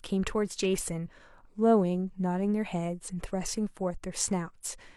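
Speech with compressed frames skipped at 1.03 s and 3.07 s: whole 46.4 ms frames vanish, one then roughly two, leaving joins where waveform and spectrogram jump ahead abruptly.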